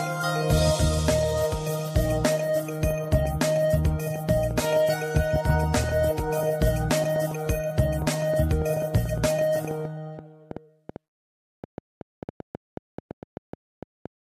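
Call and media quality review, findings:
Train of clicks, 2.91 to 14.07 s. About 5 per second, irregular spacing, around fifty in all, peaking about 5 dB above the sound. Likely interference or a faulty connection or power supply.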